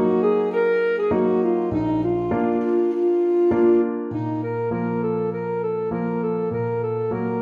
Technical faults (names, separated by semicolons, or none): none